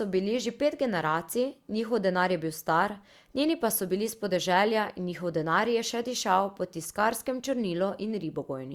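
Just speech here, and there's nothing technically amiss to flag anywhere along the way.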